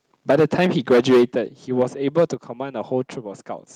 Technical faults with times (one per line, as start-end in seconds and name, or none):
0.30-1.38 microphone overload
0.31 microphone volume stepped down
1.32 microphone volume stepped down
1.79-1.83 microphone overload
2.17-2.24 microphone overload
2.34 microphone volume stepped down